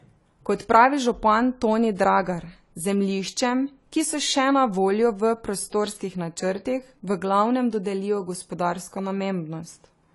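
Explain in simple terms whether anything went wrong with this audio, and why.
The speech sounds dull and smeared from start to finish, with a watery, fizzy edge on hissy consonants, and nothing above about 11.5 kHz. This most likely comes from AAC compression squeezed too hard, discarding high frequencies and fine detail to save space.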